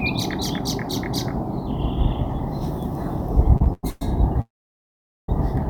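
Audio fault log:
3.57–4.02 s, repeated stalls (stutter): The sound halts four times, with the longest gap at 110 ms. About 256 ms is filled in, over half the span. Late packets kept emptying the jitter buffer. Nothing is lost, but the sound drags and stutters.
4.41–5.29 s, call audio freeze: The sound stops for 872 ms. A brief fading continuation decays into about 810 ms of silence. The likely cause is delayed packets that drained the jitter buffer. Playback then resumes where it stopped, running 872 ms later.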